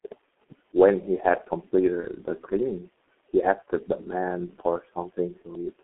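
From the start, the whole recording carries the signature of the G.723.1 codec. The audio sits in a narrow telephone band, roughly 300 Hz to 3.4 kHz, and the heavy coding leaves it muffled and hoarse, with smeared consonants. That degree of damage fits a rate near 6.3 kbit/s and the codec's long 30 ms frames and slow model updates. A plain band-limited line would sound dull but clean. This sounds dull and also rough.

At 2.00 to 2.06 s there is VoIP packet loss concealed by the speech codec. The decoder fills the hole, consistent with a single missing 30 ms frame, by extending its last pitch and filter state at falling gain. The result is a short stretched sound, a buzzy tone or coloured noise that fades, instead of a silent dropout or click. Because each frame depends on the one before, the speech stays weak or distorted just past 2.06 s before it recovers.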